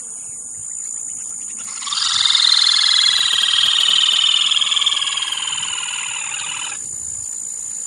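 GSM signalling bursts from a nearby 2G phone intrude from 3.18 to 4.14 s as a galloping buzz at 217 Hz, roughly 15 dB below the sound, showing as regular vertical stripes on a spectrogram.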